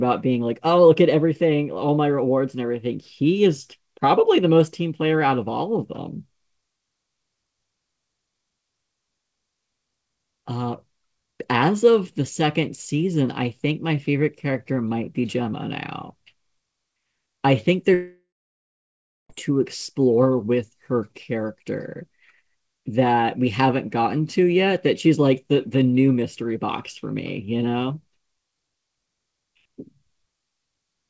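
It's a speech clip on a call path that tops out at 8 kHz, consistent with G.722. From 17.94 to 19.31 s the sound smears into a fading buzz, goes nearly silent for about a second, then resumes further on with that stretch missing, likely a long network dropout.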